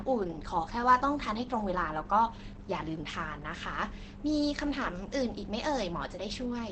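A speech recording, muffled and hoarse from start to finish, with nothing above about 8.6 kHz and heavy coding damage throughout. The likely cause is Opus compression running in its SILK speech mode at wideband, which fits a bitrate near 12 kbps.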